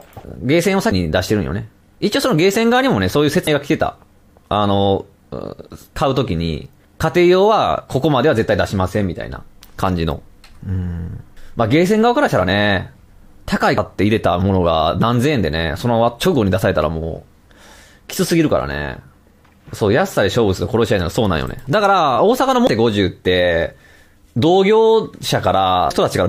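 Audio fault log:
0.91, 3.47, 13.78, 22.67 and 25.90 s: damaged data in a compressed stream. Each is a brief blip of a few milliseconds, where corrupted bytes leave the decoder misreading a frame, losing sync and hunting for the next valid header before normal playback resumes.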